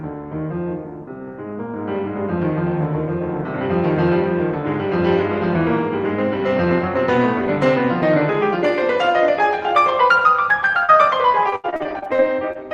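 At 10.85 s there is a short concealed packet loss, running to about 10.99 s. Part of the music stream arrived too late for the decoder. The receiver covered the hole by extending the last sound, with about 30 ms of patched audio. Another 40 ms simply drops out. The join adds roughly 20 ms of delay. The result is a quick smear in the music and a small wobble.

From 11.32 s to 12.57 s comes repeated packet loss with a robotic sound. Packets went missing again and again, leaving ten gaps. Each one is patched by stretching the preceding sound, and the next gap follows close behind. About 22 percent of this stretch is synthetic fill. The longest gap lasts 79 ms. The music turns choppy, with pieces cut out.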